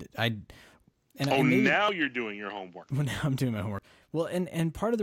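Speech in which the recorder likely drops roughly 50 ms each time it moves to a new 1-second chunk. This audio missing between chunks is heard as abrupt skips at 1.89, 2.84 and 3.79 s.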